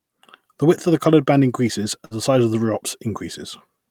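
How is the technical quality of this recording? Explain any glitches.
The recording has one glitch, a burst of packet loss, at about 2.05 to 2.14 s, just after "the coloured band increases". A run of audio data arrived too late or not at all. The receiver stretched the last sound for about 52 ms as a held, fading continuation, then jumped ahead to "the size of the", so about 60 ms is simply gone. On a spectrogram the frequency lines go flat and dim before an abrupt cut. In the waveform the signal repeats while shrinking, then changes suddenly.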